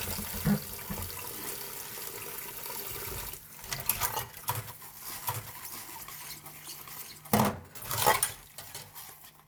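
Compressed frames skipped at 2.19 to 2.24 s: about three frames of the coded stream are missing or were rejected as damaged. The audio jumps ahead by roughly 150 ms, which fits frames of about 46 ms.

A doubled audio track runs from 5.13 to 7.35 s. A second full-band copy at about equal level trails by roughly 0.7 s, dry and uncoloured. It starts and stops abruptly, most likely from a slower second capture path or two misaligned copies in an edit.

Compressed frames skipped again at 5.67 to 5.72 s, inside the doubled stretch, drop about three frames (roughly 150 ms). At 7.81 to 7.86 s, two frames (roughly 100 ms) are lost. Each gap makes the audio jump ahead.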